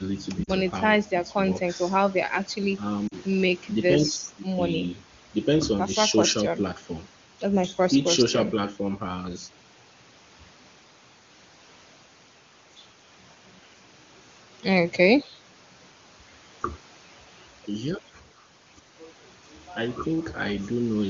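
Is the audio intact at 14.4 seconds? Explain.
Yes, at 14.4 seconds the speech is intact, with no dropout, glitch or distortion at that moment.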